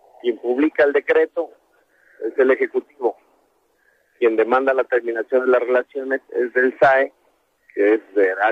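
Nothing is technically wrong with this audio.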